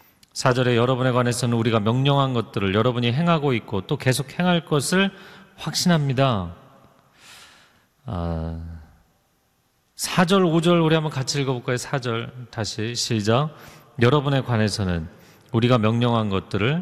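No technical faults are audible.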